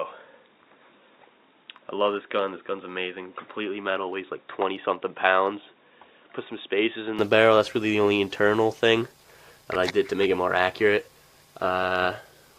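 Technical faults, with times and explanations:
0.00–7.19 s, input switched to a poorer device: the sound is dull, with nothing above 3.8 kHz, about 5 dB quieter, and carries its own noise about 35 dB down. It opens up at 7.19 s without a gap, likely a narrower-band input. Spectrogram: flat ceiling ends abruptly. Waveform: level steps up.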